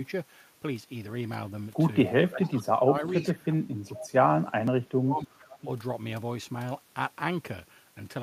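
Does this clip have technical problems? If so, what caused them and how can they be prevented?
Yes. There's an echo leak at 2.27–2.49, 3.14–3.34, 3.93–4.08 and 5.42–5.59 s: a faint copy of the speech returns about 430 ms late, roughly 15 to 25 dB down. That's likely a far-end echo canceller letting loudspeaker pickup slip back. A headset or better speaker/mic separation on that end would stop it.

There's also speech suppressed in double talk at 2.27–3.03, 3.40–4.29 and 4.63–5.39 s, where the speech dips by up to about 20 dB while both sides overlap. The likely cause is a canceller that can't tell talker from echo and ducks everything. Full-duplex-capable echo cancellation or a headset would help.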